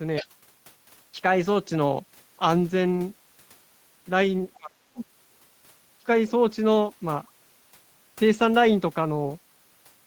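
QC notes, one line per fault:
0.16–0.27 s and 5.01–5.05 s, other side's voice leaking through: short scraps of a second voice sit roughly 15 dB under the talker. That's likely loudspeaker playback reaching the mic that the echo canceller didn't fully clear, so only brief fragments get past.
4.55–4.73 s and 4.93–5.00 s, speech suppressed in double talk: the talker's level drops sharply, around 25 dB at worst, for about a fifth of a second and then a shorter blip. Both sides were likely talking at once, and the canceller pulled everything down together.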